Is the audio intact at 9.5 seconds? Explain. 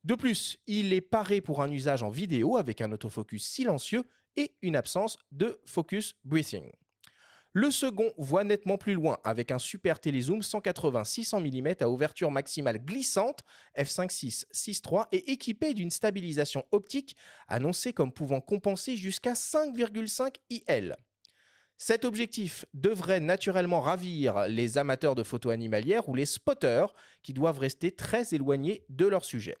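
Yes, the audio is intact at 9.5 seconds, with no audible fault at that moment.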